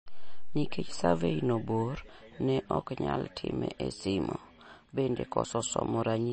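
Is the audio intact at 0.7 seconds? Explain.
No. At 0.7 seconds, as throughout the clip, the speech shows MP3 compression, likely from encoding at a low bitrate, with the damage consistent with about 32 kbps. Starved of bits, the encoder discards all content above 8.4 kHz and zeroes weaker frequency lines that then flicker on and off between frames. The result is a dull, band-limited sound with a watery, swirling texture, metallic chirps on s sounds, and smeared consonant attacks.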